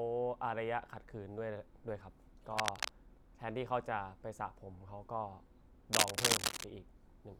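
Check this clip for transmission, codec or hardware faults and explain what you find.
Two bursts of cable scratch noise appear. A worn cable or connector was likely shifting, its contact resistance fluctuating and adding harsh, uneven crackle: from 2.57 to 2.89 s roughly as loud as the speech, and from 5.93 to 6.64 s clearly louder than it.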